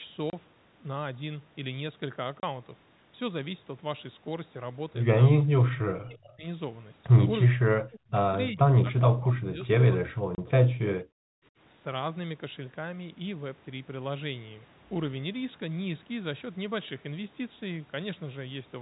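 At 0.30–0.33 s and again at 2.40–2.43 s, packet loss filled with silence opens a 30 ms gap, which fits a single lost packet replaced by silence. The waveform drops abruptly to a flat line with square edges. On a spectrogram, each gap is a narrow, fully blank column.

From 5.38 to 5.71 s, 5.96 to 6.46 s, 7.46 to 8.21 s and 8.51 to 11.3 s, the speech sinks or cuts out in pieces, at worst by about 40 dB. This is likely speech suppressed in double talk, where the echo canceller turned the talker down while the far side was speaking. The waveform envelope shrinks in uneven chunks, and on the spectrogram the energy fades.

Inside that last stretch, at 10.35–10.38 s, another 30 ms silent hole cuts through with the same hard edges.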